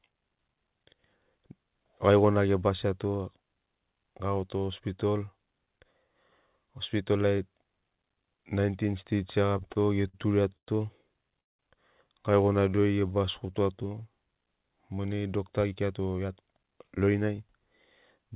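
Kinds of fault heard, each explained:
Repeated stalls (stutter): From 9.46 to 10.69 s, packets kept reaching the receiver late or more slowly than playback consumed them, so the jitter buffer emptied nine separate times. Each time the receiver stretched the last sound to cover the wait, 263 ms in all, the longest single gap 108 ms. Nothing is lost, but about a fifth of that stretch is filler, so the speech stumbles and drags in short, repeated hitches.
Call audio freeze: At 11.40 s the flow of packets was likely held up in transit long enough to drain the jitter buffer completely. For about 190 ms the receiver filled the hole, and almost all of it, 180 ms, comes out as plain silence before the speech picks up again exactly where it stopped. The result is an abrupt pause inserted mid-stream rather than any missing speech, and the playout delay ends up 189 ms longer afterwards.
Jitter buffer slow-down: Between 12.60 and 13.93 s the receiver needed to rebuild its reserve after running low or raising its target delay, so it repeatedly duplicated single pitch periods and slivers of pauses. 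In total 191 ms was added to that stretch, which therefore plays at about 86% of normal speed while the pitch stays unchanged. The speech sounds drawn out and sluggish.
Jitter buffer speed-up: From 15.64 to 17.63 s the jitter buffer was holding more audio than its target, so the receiver trimmed away short pieces one or a few pitch periods long, again and again, to bring its delay back down. Roughly a fifth of a second disappears this way, and the passage runs at about 111% speed with the pitch unaltered. The speech comes across as hurried, without sounding higher.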